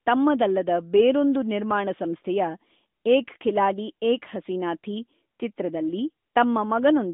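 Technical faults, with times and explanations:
No technical faults found; the speech is carried over an AMR narrowband mobile link at 12.2 kbps, band-limited to 200 Hz to 3.7 kHz.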